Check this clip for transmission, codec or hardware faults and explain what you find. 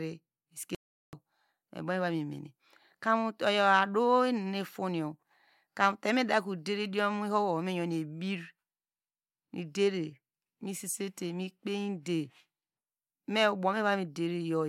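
There's one fault here, an audio dropout to silence from 0.75 to 1.13 s. The speech cuts off mid-flow into dead digital silence, with no room tone at all, for about 0.38 s. Likely the input briefly disconnected or muted while the recorder kept writing zeros, so whatever was said then is simply gone.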